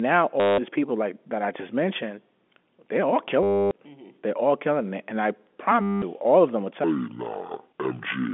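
Packet loss with the last packet repeated hits at 0.40–0.58 s, 3.43–3.71 s and 5.82–6.02 s: a robotic stutter buzzing near 100 Hz, which fits 10 ms packets. From 6.84 s to the end, that section plays at the wrong speed, about 0.59 times normal, so it drops roughly ten semitones and drags, likely from playback against the wrong clock.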